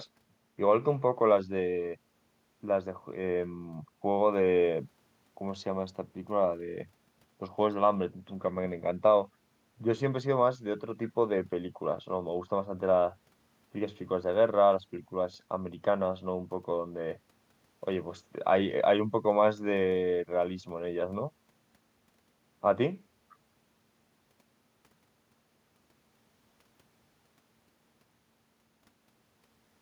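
No technical faults can be heard anywhere in this recording.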